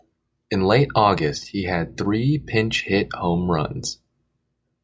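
Speech recording with no technical faults to report.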